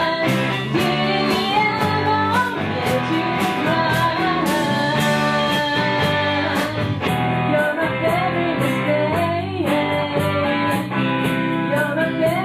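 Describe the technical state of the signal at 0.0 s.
At 0.0 s the signal is intact, with no technical fault present.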